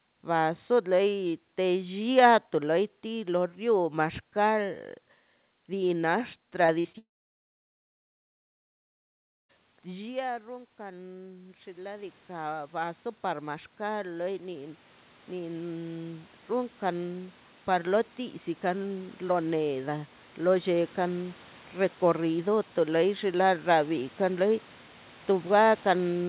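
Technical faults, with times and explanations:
6.66 s, 6.80 s and 6.92 s, short concealed packet loss: three brief smears in quick succession, where about 20 ms, 40 ms and 20 ms of audio never reached the decoder in time. The receiver extended the preceding sound across each hole, repeating its pitch where it was voiced and substituting shaped noise where it was not, then crossfaded back into the real signal. The result is a brief smear or wobble, and short transient sounds inside these spans can be lost.
6.98 to 9.51 s, long network dropout: the sound stops for about two and a half seconds. Right after the break, the last sound is briefly drawn out as a fading buzz or hiss, and for the remaining 2.4 s or so only silence or a low steady floor is heard. The likely cause is that no packets arrived for this whole stretch, so the receiver ran out of material to continue. When audio resumes, the missing portion is not replayed and the sound picks up further on.
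9.85 to 23.33 s, automatic gain rising: beginning near 10 s, the input level falls by about 16 dB, consistent with the talker moving back from the microphone. The automatic gain control responds by raising its gain gradually by about 18 dB over roughly 13 seconds. Foreground and room background swell together, so the noise floor climbs along with the level. The narrow telephone bandwidth, with nothing above 4 kHz, comes from the G.711 call codec.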